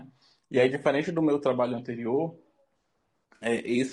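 A low-delay AAC codec, likely AAC-ELD at a bitrate that sounds around 32 kbps, has coded this short speech recording in short frames that resolve pitch harmonics poorly, so the voice comes through plainly rough and grainy, with noise filling the gaps between harmonics and a thin, synthetic-sounding top band. AAC frame loss with concealment occurs from 3.35 to 3.45 s, where the decoder patched the gap from the last good spectrum, a span that fits roughly three missing frames, leaving a brief smeared, noisy, phasey blur in the voice.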